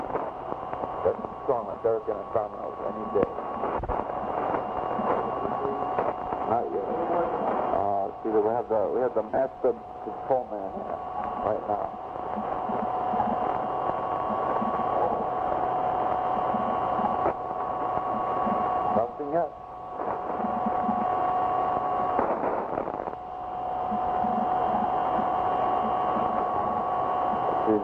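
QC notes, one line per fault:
1.71 s, 7.06 s and 26.63 s: lost LE Audio frames. The gaps are 30 ms, 30 ms and 15 ms long. The LC3 decoder refills each gap from the last spectrum with random signs, so the sound turns briefly into a noisy smear.
9.30 to 9.40 s: lost LE Audio frames. About 68 ms is lost, scattered over 90 ms, with the longest run around 40 ms. Each gap is filled with sign-scrambled copies of the preceding spectrum, heard as smeared noise.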